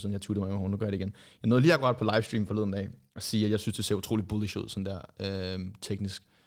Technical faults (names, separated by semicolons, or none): none